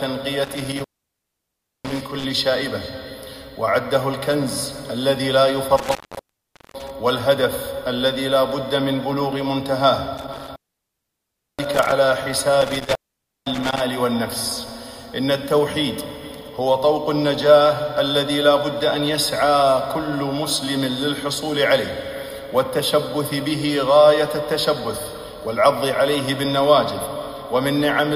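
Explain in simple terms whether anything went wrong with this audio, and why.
The sound drops out four times, with a crackle as each gap starts and ends and a faint hiss in between: from 0.45 to 2.24 s (silent for about 1 s), 5.77 to 6.90 s (about 0.8 s), 10.18 to 11.92 s (about 1 s) and 12.61 to 13.80 s (about half a second). This is an intermittent contact. A loose cable or plug briefly lost its connection, cutting the signal, then made contact again.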